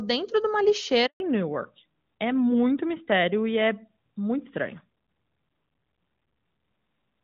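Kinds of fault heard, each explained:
Handover gap: right after "de uma" at 1.06 s the speech fades out within a few tens of milliseconds and stays silent for about 140 ms, until 1.20 s. The call was switching networks and no speech frames arrived meanwhile, so whatever was said then is gone.
Fallback to narrowband: from 1.20 s to the end the speech sounds duller and rougher, with nothing above 4 kHz. After the handover the call left the HD Voice link, whose wideband coding had sounded clear before the gap, and continued on a narrowband codec.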